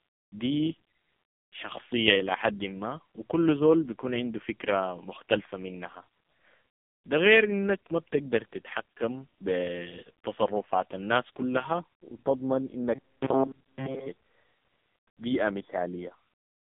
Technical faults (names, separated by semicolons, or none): AMR narrowband mobile codec